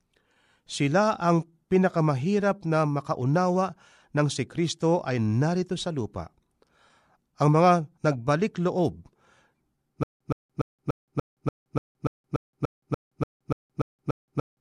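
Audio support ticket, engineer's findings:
Stutter with silent gaps from 10.03 s to end. Same 120 ms speech fragment repeats every 291 ms, 171 ms digital silence between, 15 times. Likely playback/stream stall re-serving last buffer. Waveform: identical short blocks separated by flat silent gaps; spectrogram shows repeated vertical slices with blank columns. Intervening audio lost.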